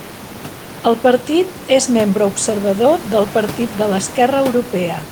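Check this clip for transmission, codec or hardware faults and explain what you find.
Nothing stood out on listening to this speech recording, apart from the room's own background noise sitting about 17 dB below the speech.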